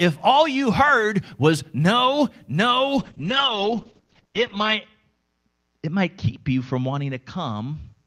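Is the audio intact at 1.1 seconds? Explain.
Yes, at 1.1 seconds the speech comes through intact, with no dropout, click, distortion or other audible fault at that moment.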